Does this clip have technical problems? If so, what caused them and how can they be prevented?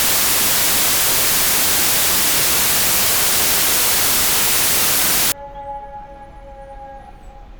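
Yes. From the start to 5.32 s the sound is buried under loud, harsh broadband noise, the result of samples built from the wrong bytes. The reader assembled each sample with the bytes misaligned or in swapped order, so the rapidly changing low-order bits landed in the most significant position and became the bulk of every value. Prevention: declare byte order and sample width explicitly and verify them when decoding.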